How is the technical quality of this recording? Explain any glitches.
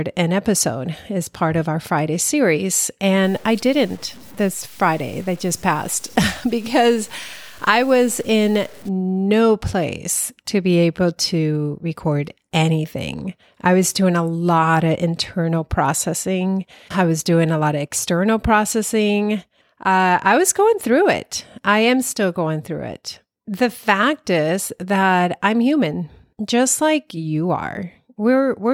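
One glitch is audible in this speech recording. Low bit depth without dither runs from 3.23 to 8.89 s. The signal is likely truncated to about 7 bits with no dither, so the rounding error tracks the speech itself. Quiet passages turn grainy and gritty, with distortion sitting roughly 30 dB below the signal.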